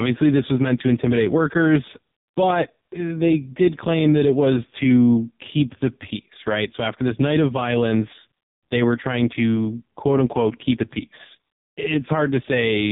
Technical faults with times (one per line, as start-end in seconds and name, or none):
0.00-12.92 AMR narrowband mobile codec